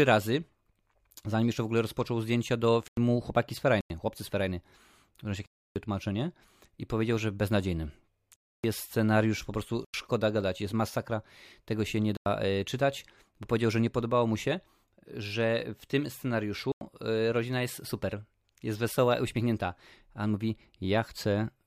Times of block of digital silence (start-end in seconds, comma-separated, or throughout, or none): 2.88-2.97, 3.81-3.90, 5.46-5.76, 8.36-8.64, 9.85-9.94, 12.17-12.26, 16.72-16.81